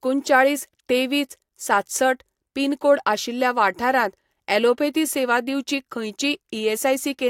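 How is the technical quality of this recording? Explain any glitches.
The technical quality holds up, and there are no glitches to explain in this speech recording. Nothing in it calls for a technical explanation.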